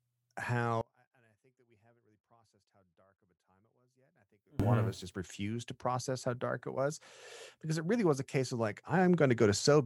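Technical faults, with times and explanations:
0.81–4.60 s, one channel inverted: the likely cause is one stereo channel arriving with its polarity flipped, so when the two sides are summed to mono, the speech they share cancels instead of adding. The level drops by about 32 dB, leaving only a faint residue of the small differences between the channels. Normal level returns just before "one of", when both channels are back in phase.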